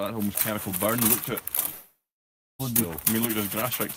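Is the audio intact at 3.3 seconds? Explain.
Yes, the audio is intact at 3.3 seconds, with no fault present at that moment.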